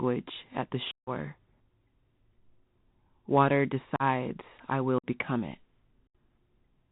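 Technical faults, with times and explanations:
Throughout: Bluetooth CVSD headset codec. The speech is band-limited to about 4 kHz, with scratchy sibilants, slope-overload distortion on loud bright sounds and a granular hiss beneath, pointing to a 64 kbps CVSD link. A spectrogram shows a hard ceiling near 4 kHz and a grainy noise floor.
0.91–1.09 s, 3.96–4.03 s, 4.98–5.06 s, 6.07–6.15 s: unconcealed Bluetooth headset packet loss. About 158, 38, 53 and 75 ms of audio drop out, the first fitting roughly twenty short lost packets. Nothing fills the gaps, so the speech stops abruptly and resumes briefly quieter. Waveform and spectrogram show flat, sharp-edged holes.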